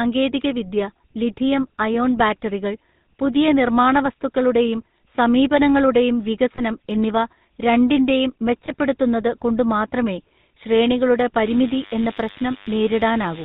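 Throughout, the speech carries the buzzy, gravelly roughness of the GSM full-rate codec, plainly audible and consistent with its 13 kbps coding. A vocal-tract model excited by sparse regular pulses gives this grit. A spectrogram shows nothing above 4 kHz and smeared, comb-like harmonics.

At 6.56–6.61 s and again at 8.66–8.74 s, lost GSM frames each leave a gap of about 20 ms. The decoder repeats the last good frame's settings, producing a brief metallic ring. The spectrogram shows a frozen spectral slice, and the waveform a short smear.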